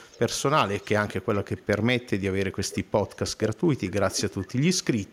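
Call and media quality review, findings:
Echo leak: faint delayed copy of the speech about 0.46 s behind, at 0.04–0.2, 0.82–0.86, 1.33–1.66, 2.69–2.8, 3.07–3.32, 3.86–3.92 and 4.11 s to the end, well below the main speech. Likely the far end's speakerphone echo canceller not fully removing its loudspeaker pickup.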